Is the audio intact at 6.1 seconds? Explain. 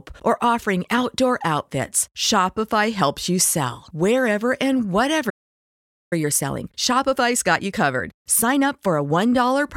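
No, at 6.1 s you're right at the tail of a playback stall. The speech cuts out mid-flow at 5.29 s and stays silent until 6.13 s, about 0.82 s of dead air. That's most likely the player running dry on data or its thread getting blocked.

The moment sound returns at 6.13 s, you get time-compressed catch-up through 9.13 s. The player trims its backlog by slicing out tiny chunks and cross-fading the rest, so the speech runs about 1.25 times fast at normal pitch.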